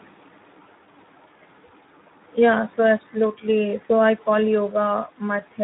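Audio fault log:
Throughout: Speex codec. The speech has a plainly audible hoarse, noisy grain. That points to an 11 kbps setting, where the CELP coder has too few bits to model the excitation accurately. The band above 4 kHz, where present, is only a shaped noise fill, not real detail.
3.87 to 3.92 s: VoIP packet loss concealed by the speech codec. About 20 ms of audio, consistent with a single lost frame, is lost just after "so absolutely". The decoder fills the gap by extending its last pitch and filter with falling gain, giving a brief fading smear. The sound stays weak as decoding recovers.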